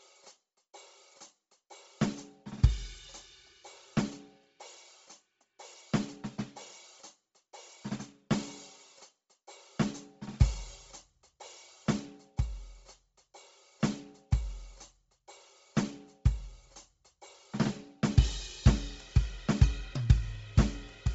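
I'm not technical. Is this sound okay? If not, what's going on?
No. From start to finish the music sounds dull and muffled at the top, with a grainy, hissy edge where the brightness should be. Nothing comes through above about 7.7 kHz. The likely cause is Bluetooth LC3 compression, the codec used by newer wireless earbuds and speakers. It chops sound into tiny 7.5 ms slices and, when squeezed hard as here, throws away most of the high end and fills it with noise.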